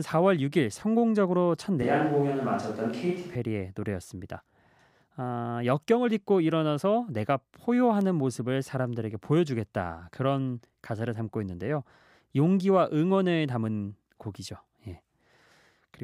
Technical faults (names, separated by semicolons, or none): switch to a distant microphone